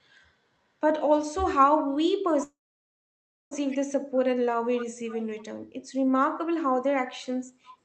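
A call audio freeze from 2.43 to 3.53 s breaks into this speech recording: the sound carries on briefly as a fading buzz, then drops to near silence for almost a second before resuming exactly where it left off. Nothing is lost, but everything after it arrives about 1.08 s late. The likely cause is delayed packets draining the jitter buffer, so the receiver stretched out the last sound until they arrived. Echo leak shows up as three short, faint scraps at 3.70 to 3.78 s, 5.07 to 5.24 s and 7.65 to 7.73 s. Each is a copy of the speech trailing by 349 ms, around 20 dB below it, and closer to 25 dB down in the last one. These point to a far-end loudspeaker whose echo canceller let part of the signal through and sent it back. Throughout, the audio is limited to about 8 kHz, which fits the call codec's bandwidth.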